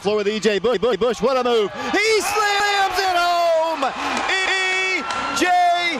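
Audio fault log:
0.74–1.12 s, 2.60–2.79 s, 4.46–4.64 s: repeated buffer. A 186 ms chunk replays, twice at 0.74 s and once elsewhere, when fresh audio arrives late. This is a short stutter, consistent with an 8192-sample buffer. Identical blocks appear side by side, with a sharp vertical edge at each join.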